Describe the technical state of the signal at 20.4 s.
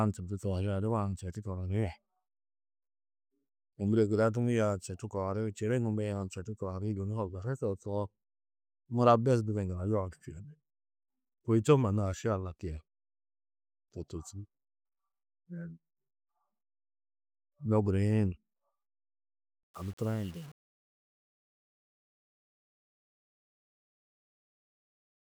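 Truncation distortion on a fade runs from 19.63 s to 25.28 s, so it covers 20.4 s. The fade-out is requantised with too few bits and no dither, which fits roughly 7-bit resolution. The falling signal becomes coarse steps, giving a gritty edge to the sound.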